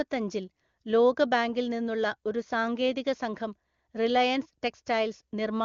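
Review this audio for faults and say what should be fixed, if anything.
Nothing here needs fixing: the speech comes through the AMR wideband (HD Voice) path with at most faint coding colour, consistent with AMR-WB running at its top rate of 23.85 kbit/s.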